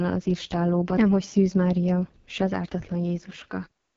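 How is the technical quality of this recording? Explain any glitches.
The technical quality is poor: the speech carries heavy codec damage from start to finish, consistent with AMR wideband (HD Voice) coding at a very low rate.

Throughout the clip, the speech sounds rough and raspy, the way AMR-WB sounds at its lowest rates; this points to the 6.6 kbit/s mode. The codec rebuilds speech up to 6.4 kHz from a pulse-excited vocal tract model and fills 6.4 to 7 kHz with shaped noise. At this rate the model is too coarse, giving the grainy, buzzy texture. On a spectrogram, nothing appears above about 7.4 kHz, and the uppermost band looks like smeared noise rather than harmonic detail.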